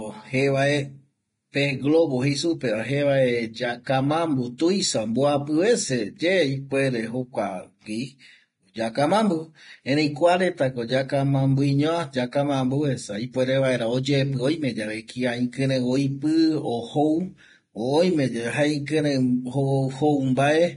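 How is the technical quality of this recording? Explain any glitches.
The technical quality is poor. Heavy lossy coding damages the whole speech clip, and three attacks carry pre-echo.

Vorbis compression runs throughout, and it is the likely cause. Nothing is heard above 10.6 kHz. The treble that remains is coarse and grainy. Fine detail has turned into hiss of similar energy. Tones sound rough and consonant attacks blur. This level of damage suggests a low bitrate, around 30 kbps. At that rate the encoder cuts the top band and quantises the residue harshly.

Pre-echo appears at 4.58 s, 6.18 s and 18.86 s. Each time a short hiss comes just before a sharp onset. It spreads about 19 ms ahead of the first two attacks and about 18 ms ahead of the third. Quantisation noise is spread across a whole transform block. When an attack sits late in a block, noise meant for the loud part leaks into the quiet gap before it. 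The attack then sounds softened.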